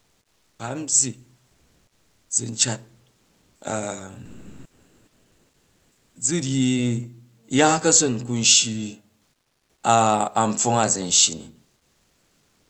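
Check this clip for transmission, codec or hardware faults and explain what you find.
There's one recurring fault here: comfort noise in place of the background, at 0.0–0.59, 1.47–2.29, 3.15–3.61, 4.25–6.15, 9.29–9.83 and 11.77–12.69 s. It's likely Opus DTX: the sender goes quiet between phrases, and the receiver fills in a smooth synthetic hiss instead of the real room tone, which sits about 48 dB under the loudest speech. The fill's level jumps around, about 15 dB down in the first gap and about 6 dB up in the second. The call codec itself is just the Opus path, band-limited at 8 kHz.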